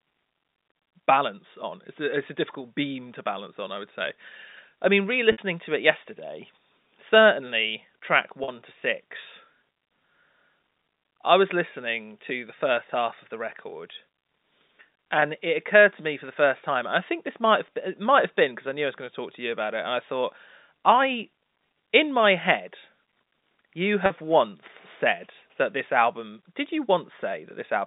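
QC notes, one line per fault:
5.32–5.38 s, packet loss with pitch repetition: a brief held, buzzy tone for 60 ms as the last pitch period is repeated and faded to cover the missing audio.
8.44–8.48 s, packet loss with pitch repetition: after "it yesterday certainly track" the sound sticks on a buzzy repeat for 40 ms before "to six", as the receiver loops one pitch cycle over the gap.
15.20–15.22 s, packet loss with pitch repetition: a barely held 20 ms buzz just before "it occurred to me", which fits one lost 20 ms packet bridged by repeating the last pitch period.
24.06–24.10 s, packet loss with pitch repetition: a 40 ms held, slightly buzzy stretch just before "once said that this", where repeated pitch periods fill the lost audio.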